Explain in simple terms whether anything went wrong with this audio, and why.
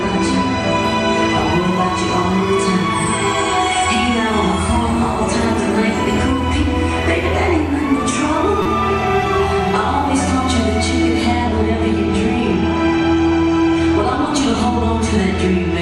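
A corrupt frame was decoded at 8.62 to 8.68 s, heard as a brief, fairly loud chirp, squeak or blip. A couple of compressed chunks of the audio were damaged, and the player decoded them anyway, so sound landed at the wrong frequencies for that split second.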